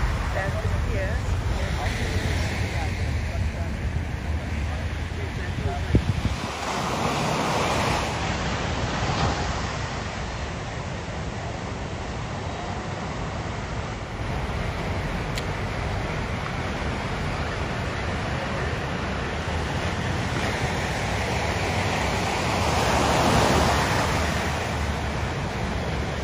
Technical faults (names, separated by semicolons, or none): digital radio blending to analogue